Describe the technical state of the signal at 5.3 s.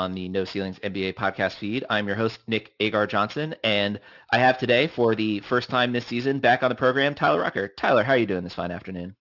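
At 5.3 s the speech carries aliasing, present throughout the clip rather than only at that moment. The audio behaves as if it was resampled to a rate near 12 kHz with no adequate low-pass filter first, so content above 6 kHz mirrored back down below that fold point. Sibilants sound gritty and metallic, with folded energy roughly 25 dB under the signal. On a spectrogram, energy runs hard up to a flat ceiling at 6 kHz, and high components appear reflected downward.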